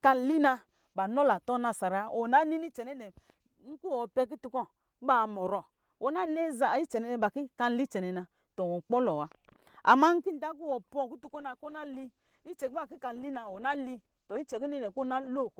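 From 11.26 s to the end, a call bitrate drop makes the speech rough and muffled, fitting a fall to 15 kbps; the spectrogram's upper band thins out.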